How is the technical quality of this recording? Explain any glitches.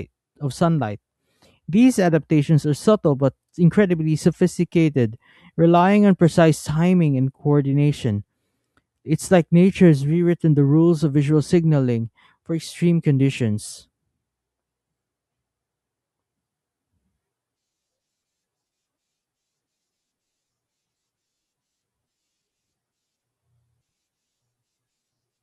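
The technical quality of the recording is sound, with no glitches to explain.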